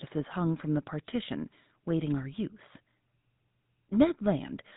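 Throughout the speech, GSM full-rate codec damage is plainly audible: pulse-driven vocal-tract modelling gives a buzzy, gravelly roughness, consistent with 13 kbps coding, and nothing above 3.8 kHz survives.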